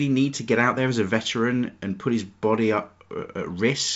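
No technical faults are audible.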